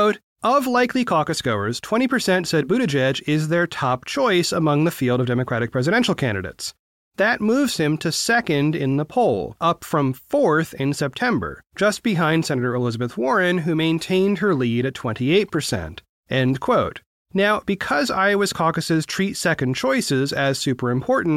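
Listening carefully to the speech, nothing stood out as a technical fault at any point.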